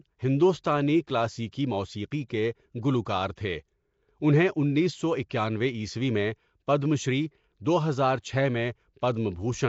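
Right from the start the speech has a rough, hissy, underwater sheen with nothing above 7.7 kHz, most likely Nellymoser compression at around 32 kbps. Then there's pre-echo at 2.28 s, 3.36 s and 5.29 s (just after "اُنہیں انیس سو"). Block-spread quantisation noise smears a hiss about 15 to 17 ms ahead of each attack.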